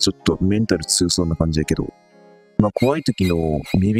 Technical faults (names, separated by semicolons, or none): DAB burbling